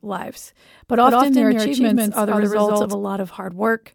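From 1.03 to 2.93 s a doubled audio track appears: a full-band copy about as loud trails by roughly 150 ms, starting and stopping abruptly, unlike echo, with no decay, likely a second capture path.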